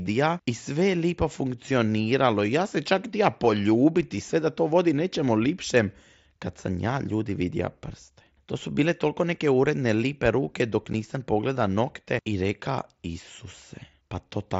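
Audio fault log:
10.93 s, unconcealed Bluetooth headset packet loss: a brief hole in the speech, about 7.5 ms long, with hard edges that can be heard as a click. A single voice packet between headset and phone appears to have gone missing, and nothing was done to hide the gap. The link's silence or idle pattern simply filled the space before speech resumed. The length fits one lost packet on the wideband mSBC link, whose light codec graininess carries on through the clip.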